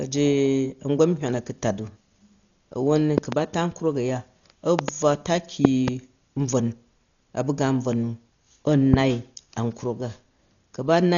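Throughout, the speech sounds dull and rough, with nothing above 6.9 kHz. This is likely heavy Dolby Digital compression, consistent with about 40 kbps.

Loud pops sit on top of the speech, which carries on underneath. There are double pops at 3.18–3.35 s, 4.79–4.91 s and 5.65–5.90 s, and a single pop at 8.94–8.96 s. Each is roughly 20 dB above the speech, likely from electrical voltage spikes.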